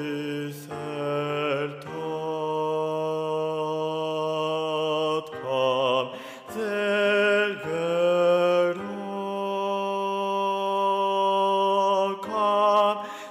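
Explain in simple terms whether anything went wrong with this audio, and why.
Nothing went wrong with this audio, because no technical fault can be heard anywhere in it.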